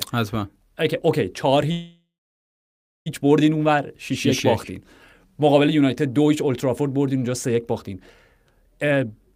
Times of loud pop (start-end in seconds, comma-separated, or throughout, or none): none